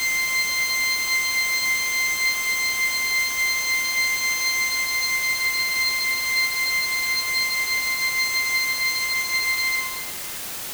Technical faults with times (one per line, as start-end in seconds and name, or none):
0.00-10.74 low bit depth with dither